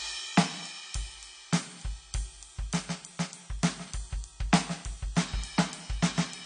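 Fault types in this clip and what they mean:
AAC compression: The music was likely squeezed through a low-bitrate AAC-LC encoder, which fits a rate around 32 kbps. At that budget the encoder discards everything above 9.9 kHz and quantises what remains coarsely against its hearing model, so the whole clip loses its top-end air and sounds dull and closed-in. The coding damage is plainly audible from start to finish, a smeared, processed texture that never lets up.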